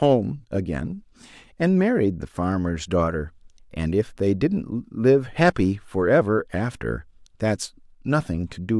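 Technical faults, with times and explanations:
No technical faults can be heard in this recording.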